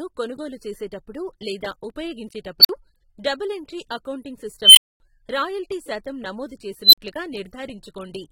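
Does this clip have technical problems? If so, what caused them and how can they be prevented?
Yes. Plainly audible AAC compression runs throughout, likely from AAC-LC at a low bitrate near 28 kbps. A spectrogram shows a lowered cut-off and spectral holes or noise-filled bands. Prevent it by encoding at a higher bitrate.

An unstable filter appears at 2.60–2.69 s, 4.64–5.00 s and 6.83–6.98 s. Tones near 5, 3 and 4 kHz swell over about 45, 124 and 103 ms, clip, then drop into silences of 46, 232 and 46 ms. On a waveform each looks like a growing wedge followed by a flat gap. Prevent it by checking that filter coefficients keep the poles inside the unit circle.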